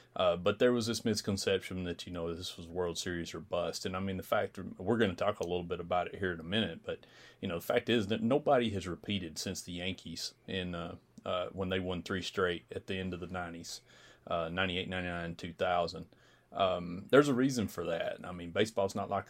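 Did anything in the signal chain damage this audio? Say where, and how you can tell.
Yes. From 4.88 s to 12.88 s, starting after "I mean the fact" and clearing before "the end of the", the speech carries a rapid ticking that merges into a 50 Hz buzz, riding on the signal itself. This is a resampler restarted on every block, at the sample-rate conversion stage. The 20 ms period points to 20 ms blocks, and the conversion fits 44.1 kHz to 48 kHz. Each block was converted in isolation, so every block boundary received a small error.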